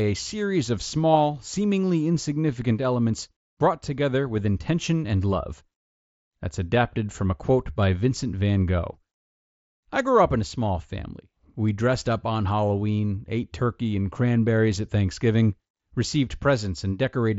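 Nothing stood out as a technical fault on listening to this speech clip.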